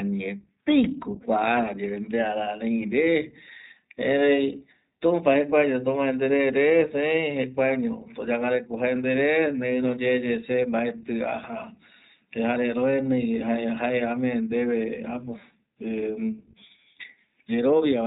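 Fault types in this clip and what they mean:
iLBC codec: The speech has passed through iLBC, a narrowband VoIP codec that rebuilds each short frame's excitation on its own, without drawing on the frame before, and the character of the coding fits its 15.2 kbps mode with 20 ms frames. The damage is plainly audible throughout. Nothing above about 3.8 kHz survives, leaving the voice muffled and telephone-like, and the independently coded frames give it a rough, slightly synthetic grain.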